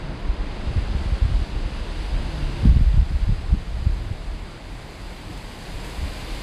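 From start to finish the audio runs slow and low, the signature of a wrong sample rate. The samples are being clocked out at two thirds of the rate they were captured at, with no resampling in between, which fits material recorded at 48 kHz and played back at 32 kHz. Everything lasts half again as long and sits about 7 semitones lower, so these everyday sounds come across as heavy, sluggish and dulled.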